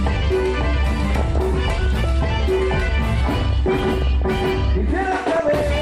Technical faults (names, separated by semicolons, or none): DAB burbling